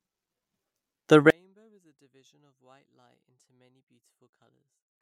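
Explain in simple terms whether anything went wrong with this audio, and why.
Something clearly goes wrong from about 1.3 seconds to the end. The speech suddenly collapses to a faint trace, as if most of it has been scooped out. The likely cause is one channel inverted: one side of the stereo signal is flipped upside down, so when both sides are combined into one, the centred voice cancels itself. Unlike a plain dropout or volume cut, it doesn't go fully silent. A ghostly remnant lingers.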